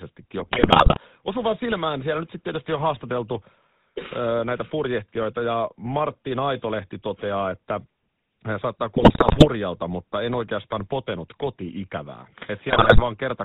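Speech with a buzzy, gravelly roughness throughout and nothing above 4 kHz, the plainly audible mark of the GSM full-rate codec. It rebuilds the voice from a vocal-tract model driven by regular pulses, and its sound fits a 13 kbps GSM full-rate stream. In three short stretches the sound breaks into squawks, pops and gargling: from 0.40 to 0.99 s, from 8.96 to 9.48 s between "hän saattaa" and "mutta en oikeastaan potenut", and from 12.68 to 13.01 s after "en oikeastaan potenut ikävää". These are GSM bit errors, and the damage suggests a few percent of bits flipped on a weak link. When corrupted filter, pitch or gain values reach the decoder, the spectrum warps or the level jumps frame by frame.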